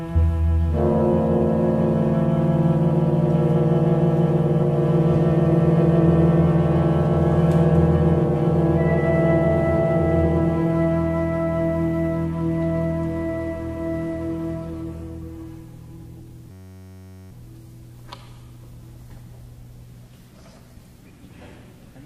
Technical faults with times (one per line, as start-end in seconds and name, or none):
16.51-17.31 system hang loop